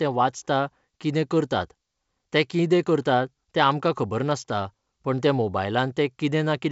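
No faults can be heard.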